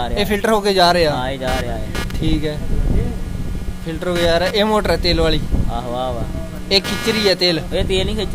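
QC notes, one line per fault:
1.47–8.34 s: computer activity noise, a buzzing chirp pulsing at roughly 200 Hz, about 15 dB below the signal, from processor load disturbing the shared audio ground.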